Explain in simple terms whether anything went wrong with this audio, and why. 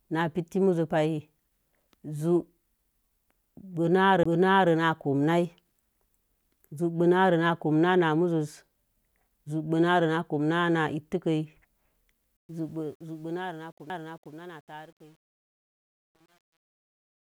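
Twice the CD player's laser jumped onto a different turn of the disc's spiral, a CD skip. At 4.23 to 4.26 s the speech drops out for a brief instant, roughly a fiftieth of a second, and jumps to another point. A tinier one hits at 13.90 s.

From 12.37 s to the end, the fade-out is handled by a digital level stage that keeps too few bits and adds no smoothing noise. This is truncation distortion on a fade, and it points to roughly 9 bits. As the speech gets quieter its waveform turns into coarse steps, so it sounds gritty, and from 13.41 s it is at its worst.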